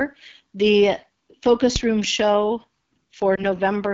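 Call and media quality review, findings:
AMR wideband (HD Voice) codec, throughout: rough, raspy speech. Rasp fits the low 8.85 kbit/s mode. Pulse-driven vocal tract model is starved of bits below 6.4 kHz. Top band to 7 kHz is shaped noise.

Phantom power thump, 1.76 to 2.13 s: deep low-frequency thump, decaying in about 83 ms. Supply switched on or off on a live input. Voltage step passes through the coupling capacitors into the signal path.

Lost AMR speech frames, 3.36 to 3.45 s: brief dip, consistent with one lost 20 ms frame. Radio errors failed the checksum. Decoder repeated the last good pitch and vocal tract settings at reduced gain. Speech recovers rough for a moment.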